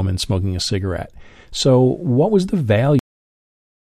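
Speech recording with a cut-off end. At 2.99 s the sound stops mid-utterance and falls straight to digital silence, with no decay. The final buffers were never written.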